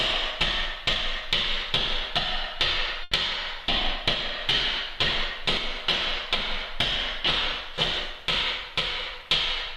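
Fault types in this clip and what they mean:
Short stall from a late packet: a packet arrived late, emptying the jitter buffer, so the receiver stretched the last sound for 80 ms and resumed where it stopped. At 3.03 to 3.13 s a sound hangs too long; nothing is lost, but the rest runs 80 ms later.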